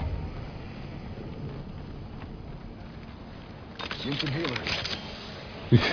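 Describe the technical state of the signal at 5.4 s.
At 5.4 s the signal is intact, with no audible fault at that moment.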